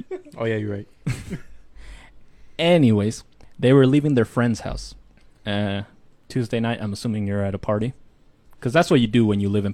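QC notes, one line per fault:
No faults found on listening; the speech needs no QC action.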